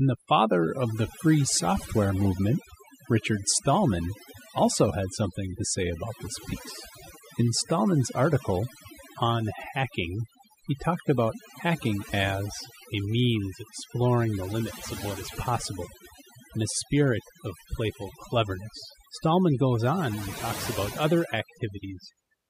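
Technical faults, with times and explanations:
Throughout, overdone noise removal: the background drops and breaks up into twinkling, chirpy specks, and the voice has its softer edges hollowed out. A noise reduction process was pushed too hard on a noisy speech recording, so individual frequency bands that sat close to its noise estimate were pulled far down or switched off entirely, taking the quieter parts of the speech along with the noise.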